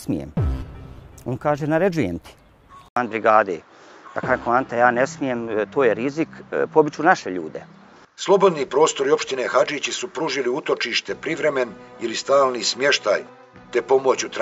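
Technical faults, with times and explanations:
2.88 s to the end, input switched to a poorer device: an 80 ms gap, then duller sound with nothing above 7.6 kHz, a small level shift and faint new hiss, likely from a narrower-band mic taking over.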